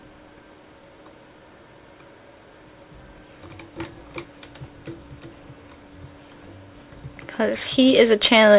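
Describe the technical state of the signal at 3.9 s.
At 3.9 s the signal is intact, with no dropout, glitch or distortion, only the call path's narrow band with nothing above 4 kHz, which fits a telephone-grade codec such as G.711 mu-law at 64 kbps.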